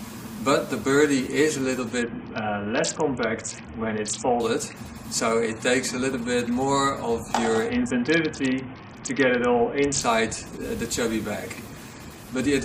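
From 2.02 to 4.4 s, and again from 7.69 to 10.01 s, the treble dulls and a gritty noise rises, then clears. This is a Bluetooth SBC bit pool drop: a congested link starved the encoder, which fits a bit pool cut from 31 to about 6.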